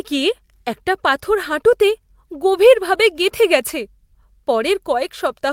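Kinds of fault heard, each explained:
No technical faults can be heard in this recording.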